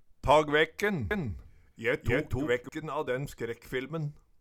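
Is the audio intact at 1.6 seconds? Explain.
No. From 1.11 to 2.69 s a doubled audio track plays, likely from a second, slower capture path, with a full-band copy about as loud as the original trailing roughly 300 ms behind. The waveform shows every event repeated once, and the spectrogram shows sharp onsets to the copy without any decay.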